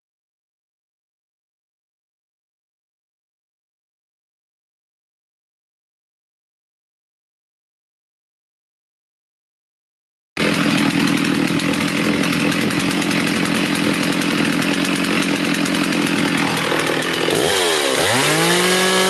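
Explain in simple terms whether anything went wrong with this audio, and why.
Nothing went wrong here.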